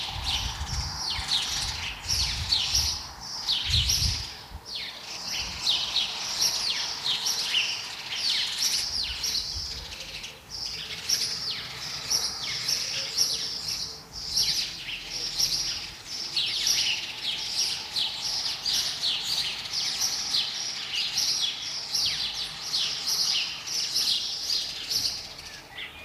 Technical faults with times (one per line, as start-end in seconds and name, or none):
20.03-22.75 crude rate conversion